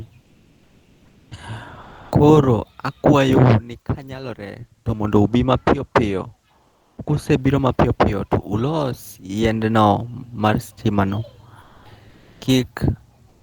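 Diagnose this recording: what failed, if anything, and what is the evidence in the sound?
Pauses at 0.25–1.27 s, 1.81–2.11 s, 6.67–6.97 s (just before "kusebiro mapiyo piyo"), 12.13–12.37 s and 13.33–13.43 s become steady, featureless hiss, stepping level by about −6 to +3 dB. This is comfort noise in place of the background, likely from Opus discontinuous transmission at the codec stage.

Right after "yiendno mar stimano", from 11.65 to 11.83 s, about 70 ms of genuine sound disappears into comfort noise lasting 180 ms. This is sound dropped by the voice detector: the sender likely judged that sound as background and stopped transmitting, so the receiver synthesised noise instead.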